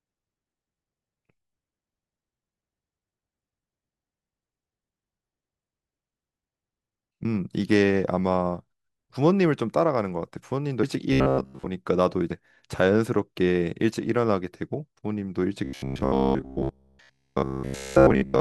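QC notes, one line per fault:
7.25 s, 10.83 s, 12.30 s: compressed frames skipped. At each spot the audio jumps ahead, losing roughly 150, 100 and 150 ms, so a few 32 ms frames each time.
11.13 to 11.67 s, 15.64 to 18.40 s: robotic sound from repeated short buffers. Both stretches become a stiff metallic buzz fixed at 66.8 Hz that only loosely tracks the speech. The cause is likely a roughly 15 ms buffer looping while most of the real audio is skipped.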